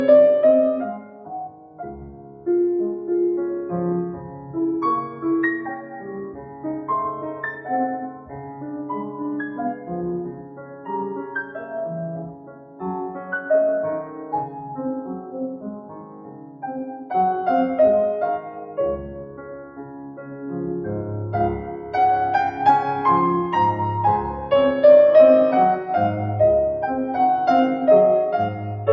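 Throughout, a noise suppressor meant for speech is applied to this sound. It mistakes steady tones and fading tails for noise. The level swings by about 10 dB. Onsets get through, but held parts sink, so the sound pumps and thins.

The suppressor cuts the sound harder at seven points: 0.99 to 2.47 s, 4.16 to 4.52 s, 5.8 to 6.65 s, 8.12 to 10.88 s, 12.28 to 12.81 s, 15.23 to 17.07 s and 19.26 to 20.43 s. The deepest drops are about 8 dB, and the shallowest, at 4.16 s, is about 5 dB. Sustained and decaying material dips audibly, and tails end early.

The band stops near 8 kHz. This fits ordinary call microphone processing.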